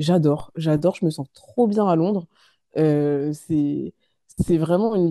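A speech clip with two low thumps, at 0.40 s and 4.48 s, while the talking carries on unchanged. Each is a DC step: the waveform's zero line jumps by about -27 dBFS, and the offset then decays away, which fits a 5 Hz high-pass filter downstream.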